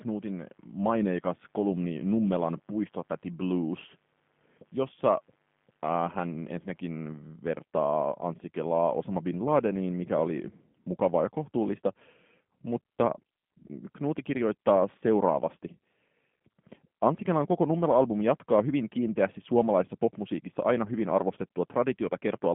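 G.729 codec damage runs through the whole of this speech recording, from start to finish. The voice is rebuilt from a vocal tract filter, a pitch predictor and a few pulses per frame rather than carried as a waveform, so it comes out plainly rough and slightly synthetic, consistent with an 8 kbit/s stream. The line band spans roughly 150 Hz to 3.5 kHz, with nothing above 3.6 kHz, leaving sibilants dull and the top end missing.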